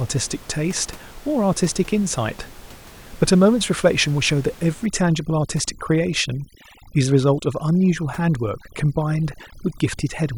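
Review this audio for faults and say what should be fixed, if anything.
Overdone noise removal runs from 4.86 s to the end of the clip. From that point a noise reduction stage is cutting individual frequency bands far down or off whenever they sit close to its noise estimate, so the room noise, which lies about 23 dB below the speech, drops and breaks up into twinkling specks, and the quieter parts of the speech are removed along with it. To prevent it, lower the reduction strength so that the room noise is softened rather than gated band by band.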